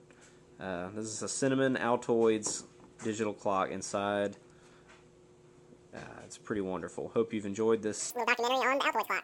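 From 8.10 s to 9.24 s, a wrong sample rate fault takes over. The audio plays at exactly twice its proper speed, with pitch raised a full octave, 12 semitones. That fits 24 kHz audio being played at 48 kHz without conversion. Everything sounds high and hurried.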